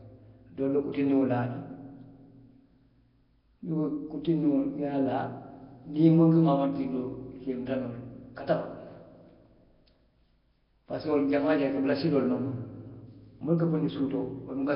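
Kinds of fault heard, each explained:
Nellymoser compression: throughout, the speech has a rough, hissy halo and a smeared, underwater quality, with nothing above 5.3 kHz. The likely cause is Flash's Nellymoser Asao codec, which starves weak bands of bits and fills them with noise, consistent with heavy coding near 22 kbps.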